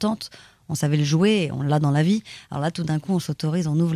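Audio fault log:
Nothing to log here: this bit of speech comes across without a single fault worth noting.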